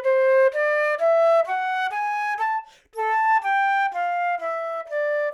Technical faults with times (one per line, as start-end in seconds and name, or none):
none